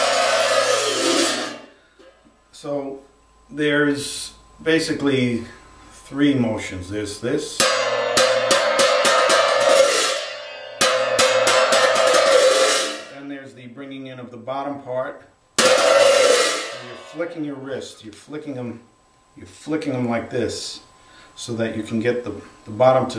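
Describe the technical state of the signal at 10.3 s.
At 10.3 s the signal is intact, with no audible fault at that moment.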